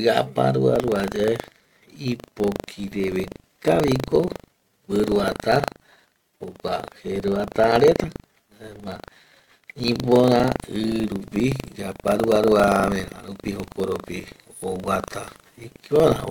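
From 0.72 s to the end, buffer tearing puts a robotic rattle at 25 Hz over the speech. The writer and reader of the ring buffer have slipped, so a small slice of each 40 ms period replays audio about a tenth of a second old, hard-spliced both sides.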